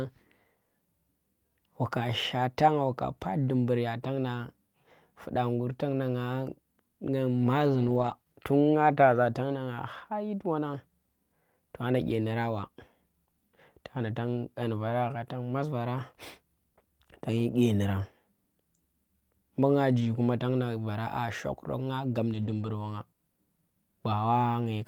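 At 5.72–5.74 s, 7.74–8.12 s, 20.00–20.06 s and 22.34–22.68 s, lost packets were rebuilt from error correction. Later packets carried low-bitrate copies, so the speech never gaps but turns briefly rougher and noisier, without the smeared, repeating tone of guessed concealment.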